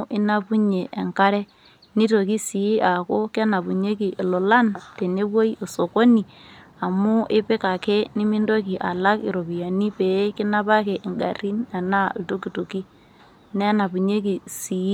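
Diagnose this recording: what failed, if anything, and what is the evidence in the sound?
Nothing failed here; I can't hear anything wrong at any stage of the chain in this speech recording.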